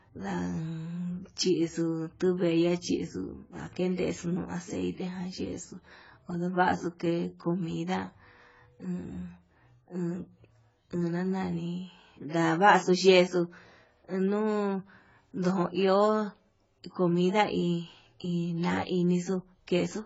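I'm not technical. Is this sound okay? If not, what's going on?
No. From start to finish the speech sounds dull and smeared, with nothing above about 7.7 kHz and a fizzy, warbling edge on hisses and held sounds. That is heavy AAC compression damage, likely from squeezing the file into far too little data.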